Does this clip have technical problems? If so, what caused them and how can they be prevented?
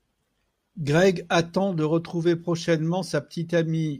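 No, nothing in this speech recording points to a technical fault, so there is no cause to trace and no preventive step to take.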